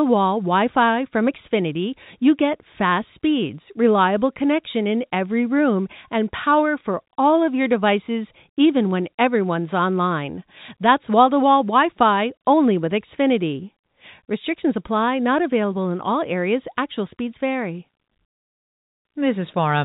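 A speech recording, and nothing is technically wrong with it.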